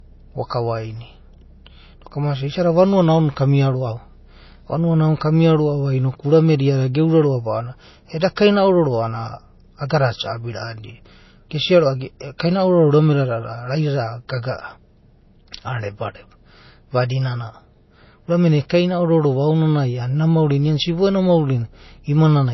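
Low-bitrate audio saved at a high bitrate runs through the whole speech clip. Nothing is present above about 5.8 kHz, and the sound has the smeared, swirly character of heavy perceptual coding. The likely cause is a file first squeezed at a very low bitrate, consistent with MP3 at around 24 kbit/s, then re-encoded at something like 165 kbit/s. The larger second file cannot bring back the discarded detail, so the dull top end and earlier artefacts remain.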